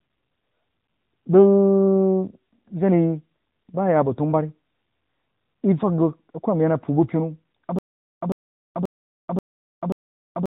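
Throughout, the speech has passed through the AMR narrowband mobile codec. Its 8 kHz sampling removes everything above 4 kHz, and its pulse-driven vocal-tract model leaves the voice plainly buzzy and synthetic. The damage fits AMR-NB's 10.2 kbps mode.

From 7.79 s to the end, there is stutter with silent gaps. The playback or stream likely stalled and replayed its last fragment on each retry before running dry. A 105 ms burst repeats five times, every 534 ms, separated by 429 ms of digital silence, and the intervening speech is lost.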